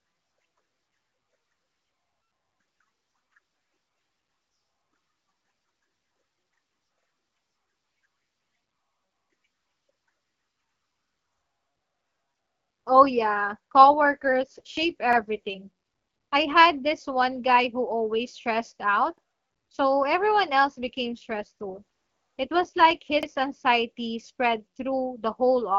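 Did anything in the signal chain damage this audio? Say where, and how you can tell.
Yes. Overlapping chunks at the buffer stage: stutters at 2.98, 7.03, 11.08, 15.13, 19.18 and 23.23 s, every 4 s, where each new block restarts 50 ms early and replays that slice.

AMR rate drop from the radio network: from 13.86 to 15.50 s and 20.55 to 23.54 s the AMR-WB speech turns rougher and more synthetic, without gaps or lost bandwidth, as the codec falls from 12.65 to 8.85 kbit/s.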